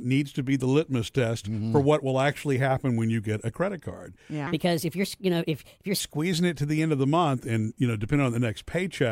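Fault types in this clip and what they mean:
Section at the wrong speed: speech after "get a credit card" runs 1.31 times fast and about five semitones high, likely from a playback clock mismatch.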